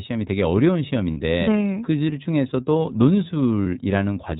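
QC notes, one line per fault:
Throughout: iLBC codec at 13.33 kbps. The sound is narrowband, with nothing above 4 kHz. Each 30 ms frame's excitation is coded independently, and the coding damage is plainly audible as a slightly rough, synthetic texture on the speech.
1.11–1.17 s and 3.63–3.66 s: lost iLBC frames, about 60 ms and 30 ms missing, which suggests two frames and then one. The decoder filled each gap by repeating the last pitch cycle mixed with noise, giving a brief held, buzzy vowel. The speech then recovers almost immediately.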